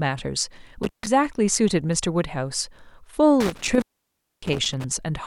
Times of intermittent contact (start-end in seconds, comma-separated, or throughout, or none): 0.83-1.07, 3.40-4.84